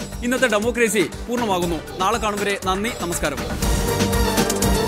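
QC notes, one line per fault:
No technical faults were found anywhere in the signal.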